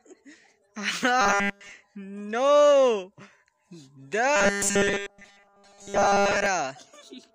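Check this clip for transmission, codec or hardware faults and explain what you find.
Two faults, both robotic sound from repeated short buffers. Between 1.21 and 1.71 s, then 4.36 to 6.46 s, audio likely arrived too late and a 5 ms buffer was replayed in its place, skipping the real signal. That imposes a rigid 200 Hz metallic buzz, covering the first stretch entirely and most of the second.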